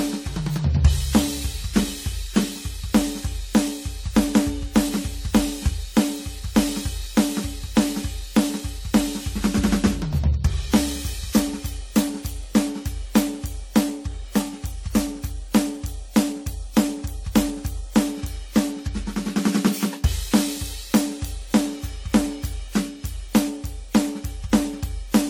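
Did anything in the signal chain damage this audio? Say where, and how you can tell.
Yes. Throughout the music, the codec stage shows generation loss: swirly, hollow tone and blurred attacks, with spectrogram holes and smeared transients. Content reaches 20.1 kHz, so this is likely repeated AAC-LC re-encoding, around seven passes at about 64 kbit/s, compounding quantisation noise.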